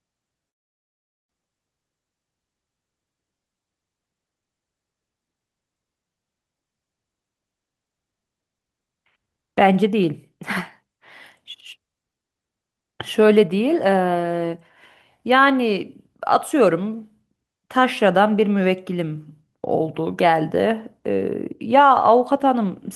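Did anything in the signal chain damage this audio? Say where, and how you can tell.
Yes. At 0.49 s the speech cuts out. The last sound is briefly stretched into a fading buzz before settling into near-silence, and it doesn't resume until 1.33 s. About 0.6 s of material is missing, so the speech picks up further along rather than where it stopped. This is likely a long network dropout: packets stopped arriving, the receiver's concealment extended the final sound, and then it fell to silence.

Right after the gap, from 1.41 to 2.76 s, the speech runs at about 114% of normal speed with the pitch unchanged, so it sounds hurried. This is a jitter buffer speed-up at the receiving end. After the dropout the buffer held around a fifth of a second more audio than its target, and it trimmed many short pitch-period slices in a row to bring the delay back down.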